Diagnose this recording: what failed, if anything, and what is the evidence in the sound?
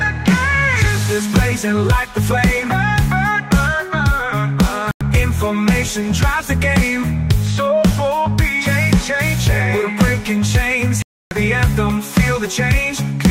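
The receiver side failed with a digital broadcast dropout. The audio mutes cleanly at 4.91 s for about 0.1 s, then again at 11.02 s for about 0.29 s, coming back mid-programme each time with the missing stretch simply gone. That's the decoder losing lock or rejecting corrupted frames and muting until valid ones arrive. The 96 ms and 288 ms gaps fit whole frames of roughly 32 ms being dropped, three and then nine of them.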